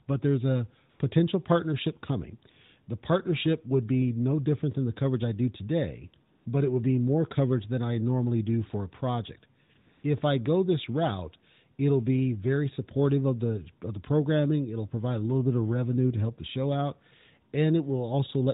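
AMR comfort noise replaces the pauses at 0.90–1.00 s (after "there's a"), 6.34–6.46 s (after "coverage I do today"), and in three bursts at 9.64–9.70, 9.74–9.76 and 9.78–10.04 s (after "do for a project"). The phone judged these moments silent and stopped sending speech frames, so the receiver filled the gaps with smooth synthetic noise. Unlike a dropout, sound never falls to dead silence. The real background texture simply switches to a steady, featureless hiss.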